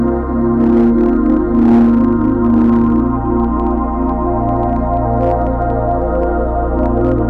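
Throughout the music, hard clipping: a stage overdriven by about 7 dB flattens the peaks of roughly 3 percent of samples, adding harsh crackle to loud moments.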